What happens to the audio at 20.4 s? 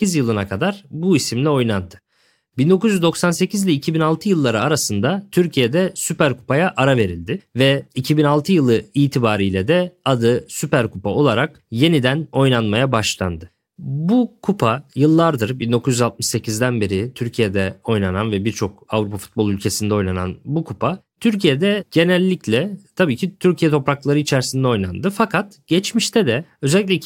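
At 20.4 s the speech continues cleanly, with no dropout, click, distortion or other fault at that point.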